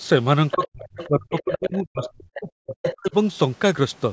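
Speech from a call in which the echo canceller likely failed to strip out the far end's loudspeaker sound, so the other side's voice leaks through in scraps at 0.51–0.67, 0.87–1.07, 1.3–1.57, 2.02–2.1, 2.34–2.39 and 2.71–2.94 s, between about 5 and 20 dB below the talker. Speech is also suppressed in double talk: with both sides active, the canceller likely turned everything down, so from 0.54 to 3.14 s the talker's voice dips by as much as about 40 dB, for roughly two seconds in all, within a band that stops at 8 kHz.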